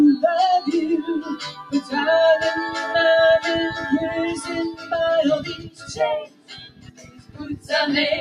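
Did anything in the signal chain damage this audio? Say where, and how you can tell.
Yes. At the call-processing stage, a speech-tuned noise suppressor was applied to music or sounds across the whole clip. Its gain swings by roughly 15 dB, so sustained parts pump and thin. The waveform envelope breathes, and the spectrogram shows held energy fading while onsets stay bright.

Sound cut by the noise suppressor occurs at 1.22–1.92 s (about 11 dB down), 4.72–4.92 s (about 12 dB), 5.5–5.92 s (about 15 dB) and 6.26–7.7 s (about 16 dB). The suppressor misread steady material as noise, producing dark gaps in the spectrogram and sunken, truncated tails in the waveform.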